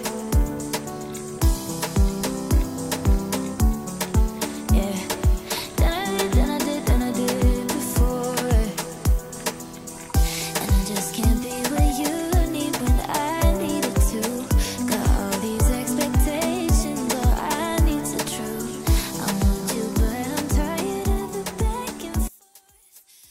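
Right at the tail, from 22.28 s to the end at 23.31 s, the sound suddenly collapses in level by about 24 dB and goes faint. That's the signature of one channel inverted: with one side's polarity flipped, anything shared between left and right cancels when the two are summed, so the shared content largely disappears and only the difference between channels survives. Here it's likely a polarity flip on one channel for that last stretch.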